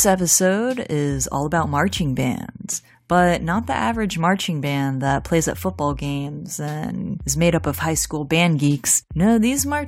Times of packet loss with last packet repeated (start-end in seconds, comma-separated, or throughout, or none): none